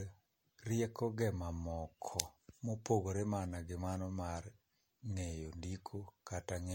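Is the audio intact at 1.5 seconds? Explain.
No, generation loss affects the whole clip, 1.5 s included: audio likely re-encoded around seven times as MP3 near 64 kbit/s, leaving swirly, hollow, smeared speech with nothing above 16.7 kHz.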